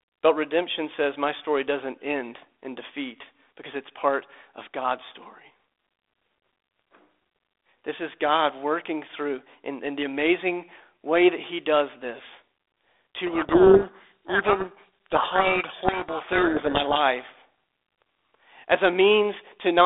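From 13.26 to 17.03 s the speech drowns in harsh, gritty distortion: a codec payload misread, where the G.726 code words are unpacked with their bit order reversed.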